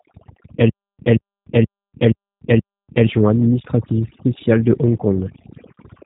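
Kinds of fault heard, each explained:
Overdone noise removal: heavy spectral noise reduction zeroes bands near the noise estimate, leaving a near-silent background with twinkling specks throughout.
G.729 codec: low-rate 8 kbit/s speech coding rebuilds the voice from a vocal tract model, cutting everything above 3.8 kHz and leaving speech audibly rough and synthetic.
Stutter with silent gaps: from 0.69 to 3.07 s a 179 ms fragment repeats five times every 475 ms with 296 ms silences, likely a stalling stream, before "administrative spéciale de".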